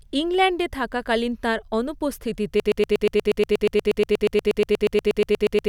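At 2.60 s a broken-record loop begins. A single 120 ms fragment repeats exactly, 26 times back to back, through the end, likely from a stalled player or stream resending its last fragment. Unlike a stutter, playback never moves forward again.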